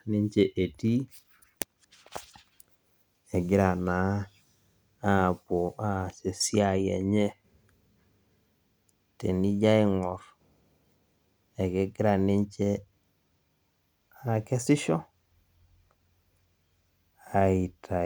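Nothing goes wrong anywhere in this speech recording, so there's no technical fault to point out.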